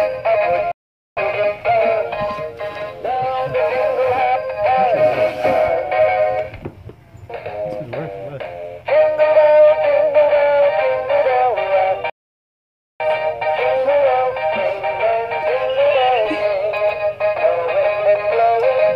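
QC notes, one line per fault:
0.72–1.17 s, playback stall: the sound cuts out mid-flow and there's roughly 0.45 s of dead silence before it carries on. Most likely the player ran dry of buffered data or its thread got held up.
12.10–13.00 s, playback stall: same thing but longer, about 0.9 s of silence, then it resumes. Likely the same starvation or blocked output thread, just taking twice as long to recover.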